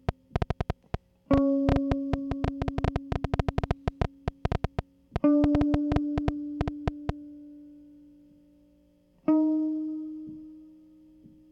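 From 0.09 to 7.10 s, a train of clicks, roughly fifty irregular pops at about 7.6 per second, ticks well above the music, likely from equipment interference.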